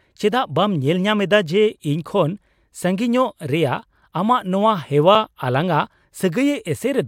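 A speech recording with one technical fault: a block of digital silence at 5.15 s. The signal drops straight to silence for about 2.9 ms and returns with no fade, so both edges are abrupt steps and the hole is too short to register as a gap. It comes across as a tick or dip. A dropout this brief and this clean suggests the output buffer was not filled in time, and its length fits a 128-sample buffer.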